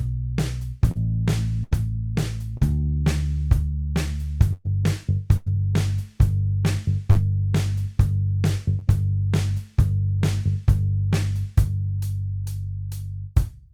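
At 0.91 s there is a brief smear lasting about 40 ms, a short concealed packet loss. That much audio never reached the decoder in time, and the receiver patched the hole by carrying the preceding sound forward before blending back into the real signal. At 1.63 s comes a longer held, fading stretch, a burst of packet loss. About 80 ms went missing in a row, so the last sound was extended and turned down until the stream resumed further on, with the lost portion gone. Another short smear of about 40 ms follows at 2.57 s from the same kind of brief concealed gap. Two more bursts land close together. At 4.53 s about 120 ms is lost and filled with a decaying continuation, with no dead silence. At 5.37 s about 100 ms is lost and bridged the same way. The sound then picks up past the missing material each time. Short concealed losses return at 7.11 s, about 40 ms, and at 8.79 s, a shorter 20 ms blip, each heard as a quick smear or wobble where the decoder invented the missing audio.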